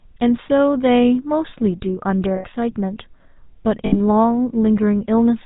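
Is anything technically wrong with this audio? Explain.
Yes, the speech has two codec faults. Throughout, the GSM full-rate codec gives a buzzy, gravelly roughness, consistent with 13 kbps GSM. It rebuilds the voice from a vocal-tract model driven by sparse, regularly spaced pulses. A spectrogram shows nothing above 4 kHz and smeared, grainy harmonics.

Lost GSM frames occur at 2.36 to 2.45 s (80 ms) and 3.86 to 3.98 s (60 ms). The decoder repeats the last good frame's settings, so the sound freezes into a brief metallic ring. On a spectrogram it appears as a flat, unchanging band, and on a waveform as a repetitive patch.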